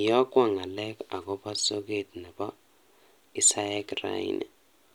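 No technical faults can be heard anywhere in the recording. There is nothing to mark at any point in the audio.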